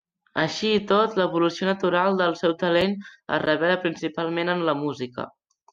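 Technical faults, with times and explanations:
2.81 s, gap between stream segments: the segment time stamps fail to meet, leaving 4.6 ms the player fills with silence, heard as a brief hard-edged dropout in the speech.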